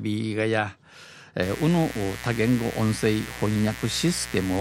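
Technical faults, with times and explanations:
1.43 to 4.60 s, mains buzz: a steady, raspy buzz enters partway through the speech and lasts to the end, roughly 15 dB below the speech. It repeats at the 60 Hz mains rate, but sharp switching spikes, twice per cycle, stack its harmonics up into the kilohertz range. That bright, edgy texture sets it apart from plain mains hum, which stays a smooth, low tone near 60 or 120 Hz.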